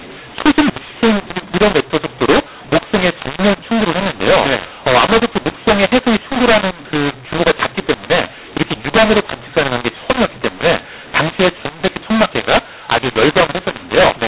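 Throughout, mu-law and A-law are mixed up: A-law samples decoded as mu-law scramble levels, making speech harsh, and the waveform shows pauses filled with noise.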